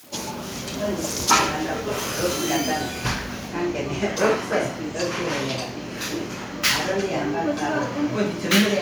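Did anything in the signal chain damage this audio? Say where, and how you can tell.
Yes. From 0 to 3.48 s, the sound carries grainy distortion that tracks the signal, and quiet passages turn gritty with a noise floor around 30 dB below the material. This is low bit depth without dither, likely an undithered truncation to 8 bits during sample-format conversion.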